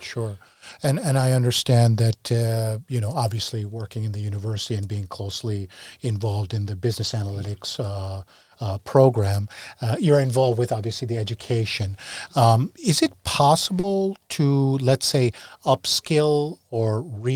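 At 0.69–0.71, 3.07–3.13 (after "uh you know"), 4.47–4.57 (after "working in the"), 7.03–7.13 (after "closely involved in the"), 10.49–10.51, 11.81–11.83 and 13.83–13.85 s, the speech turns briefly rough and grainy. Each is a lost packet rebuilt from error correction: the decoder played a low-bitrate backup copy carried in the next packet, so nothing drops out. The rebuilt stretches last 20 to 60 ms. A waveform shows no gap, but a spectrogram shows short patches of blurred, noisier texture.

At 13.79–13.85 s, a short concealed packet loss leaves a quick smear. About 40 ms never arrived in time, so the decoder extended the preceding sound before blending back into the real audio. On a spectrogram this appears as a brief smoothed, stretched-out patch.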